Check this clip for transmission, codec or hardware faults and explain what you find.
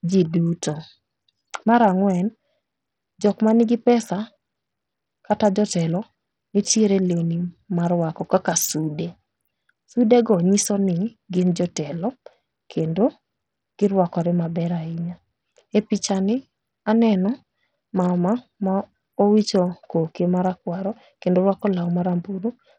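One fault runs through the whole speech clip: heavy codec damage that sounds like Bluetooth SBC compression. The treble flickers and drops away. A gritty noise and aliasing ride on the voice. This is likely a starved SBC bit pool, which fits a low rate near 64 kbps. The top sub-bands lose their bits, and the rest are coarsely quantised.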